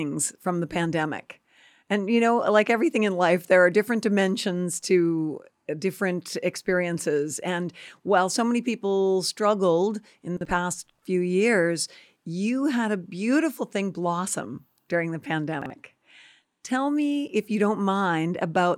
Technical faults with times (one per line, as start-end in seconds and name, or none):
10.37-10.45 chunks out of order
15.62-15.70 chunks out of order